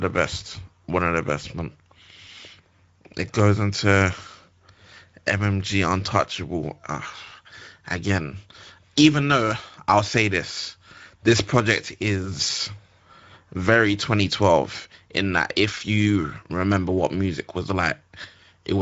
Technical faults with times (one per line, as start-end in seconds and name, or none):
0.00-18.82 Speex codec